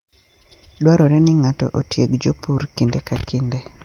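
Nothing stood out as a technical problem on listening to this speech recording.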